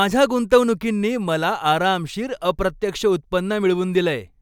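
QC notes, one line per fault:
No faults heard anywhere in this speech recording.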